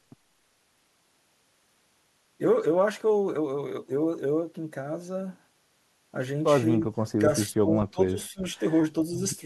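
Speech dips at 6.78–6.87, 7.17–7.23, 7.49–7.68 and 7.91–8.57 s, from a slight drop to about 20–25 dB, likely speech suppressed in double talk; the waveform shows notched gaps, the spectrogram faded bands.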